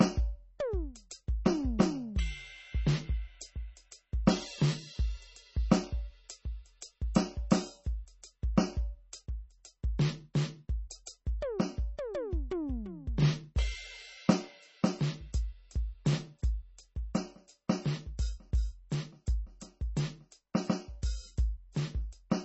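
Throughout the music, the top end stops at 8 kHz and the sound turns watery and swirly, with smeared attacks, heavy damage likely from MP3 compression at a very low bitrate. At 11.06 s a brief hiss about 13 ms long precedes an attack: pre-echo, where block-spread quantisation noise leaks ahead of the transient and softens it.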